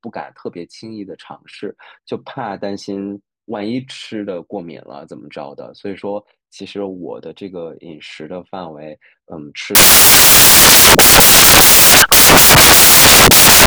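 From 9.75 s to the end, samples built from the wrong bytes turn the speech into loud white noise, unlike clipping, because misassembled low bits dominate.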